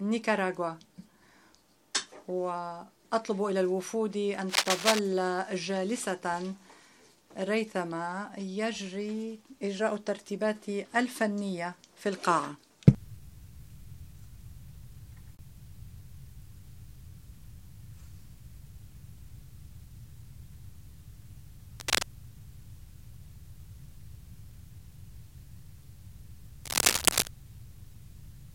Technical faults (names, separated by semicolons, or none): cable scratch noise